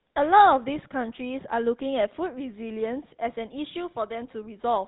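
Speech clip run through a GSM full-rate codec the whole way: buzzy, gravelly excitation and nothing above 3.9 kHz, which fits the old 13 kbps mobile codec.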